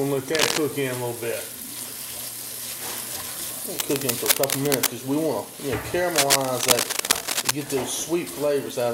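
Bursts of dense, uneven scratching and rustling sit over the sound from 0.35 to 0.58 s, 3.76 to 4.90 s and 6.15 to 7.51 s, level with or slightly louder than the audio. This cable scratch noise is likely a worn cable or connector being moved, its contact resistance fluctuating rapidly.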